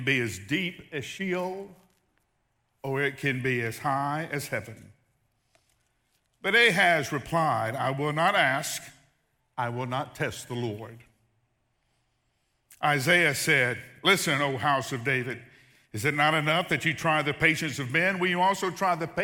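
No technical faults are audible anywhere in this speech.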